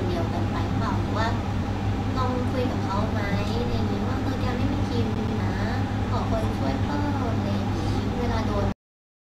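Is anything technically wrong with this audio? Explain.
Yes. From 5.15 to 5.40 s, a CD stuck on one turn replays the same 128 ms slice twice, with a short mute at each jump. It is evenly timed, unlike random dropouts. At 8.72 s, damaged data in a compressed stream makes the decoder lose sync, giving a single brief glitch rather than a repeating loop.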